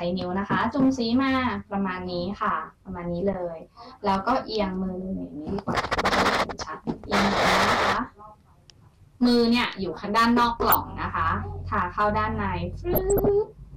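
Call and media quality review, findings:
Underrun with held sample at 3.33 s. Sound just stops for about 12 ms, waveform parked flat at its last value, so barely a click. Output buffer ran dry, fits a 512-sample buffer. Playback picks up right where it left off.

DAB burbling, two bursts. First at 10.66 to 10.75 s, short and fairly light: a few watery blips. Second at 12.93 to 13.28 s, heavier, proper squelchy mud over the sound. Weak DAB reception, bit errors slipping past error correction into the MP2 stream; corrupted samples putting noise blips in single sub-bands, corrupted scale factors making sub-bands jump in level for up to a frame.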